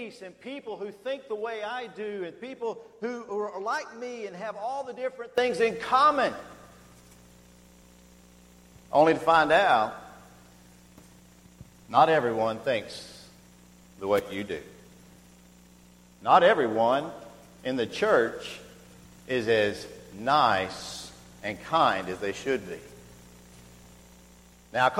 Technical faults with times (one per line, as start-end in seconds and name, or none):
5.38-24.99 sudden gain jump